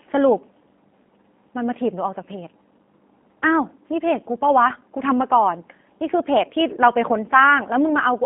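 From start to finish the speech passes through the G.729 codec at 8 kbit/s. Nothing above 3.5 kHz survives. The voice sounds rough, thin and plainly synthetic.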